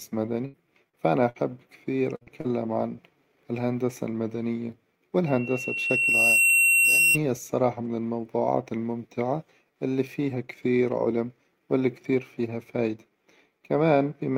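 Bursts of packet loss occur at 0.45 to 0.55 s, 1.29 to 1.38 s and 2.16 to 2.23 s. In each, a run of speech packets failed to arrive in time. The receiver extended the last sound for roughly 50 to 80 ms and let it fade, so a held buzz or dying hiss stands in for the speech. When the audio returns it has jumped forward, leaving out about 60 to 80 ms of the speech.

Short concealed packet loss appears at 0.89 to 0.95 s, then at 2.23 to 2.29 s immediately after the third burst, and again at 2.41 to 2.46 s, both of the later ones just before "عن الهندسة المدنية". Each time about 40 ms of speech went missing, and the decoder patched it with roughly 37 ms of sound continued from the preceding pitch or noise before blending back in. The patches are heard as a brief smear or wobble, and a quick consonant may drop out.

A loudspeaker feedback squeal runs from 5.26 to 7.18 s, between "عن الهندسة المدنية" and "الصراحة من الموظوعات الممتعة". 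The microphone picked up the loudspeaker it was driving, and at 2.7 kHz the loop gain went above one, so that tone fed on itself. It swells over about a second into a piercing whistle that ends up a few dB louder than the speech, which sits underneath it until the loop breaks.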